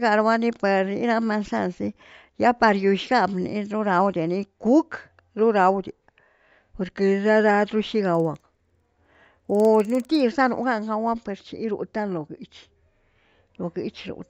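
Resampler restarted on every block, 8.05 to 10.2 s: each 50 ms block converted from 16 kHz to 48 kHz separately, leaving edge errors heard as 20 Hz ticking over the speech.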